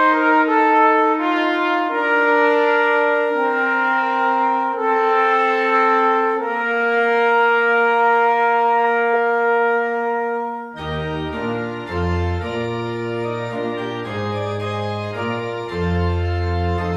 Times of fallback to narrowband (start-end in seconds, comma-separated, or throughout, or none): none